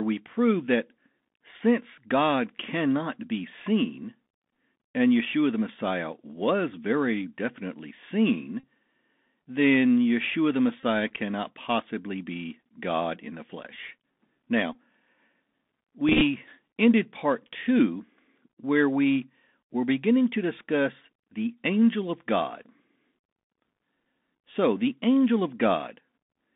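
This is a speech clip heard entirely through the Bluetooth CVSD headset codec. Everything sits in a narrow 200 Hz to 3.6 kHz band, which fits the 64 kbps one-bit delta scheme. The s sounds come out scratchy, loud bright bits overload the step size, and a grainy hiss runs underneath. On top of that there's Bluetooth headset packet repetition, where lost packets got refilled by decoding the previous one again. You get short buzzy patches near 267 Hz, from a repeat every 3.75 ms, at 8.60–8.63 s (about 34 ms), 10.80–10.83 s (about 26 ms) and 14.73–14.75 s (about 19 ms). Then from 16.09 to 16.23 s there's a looser cluster of ticks and brief buzzes adding up to 60 ms, none much longer than roughly 10 ms.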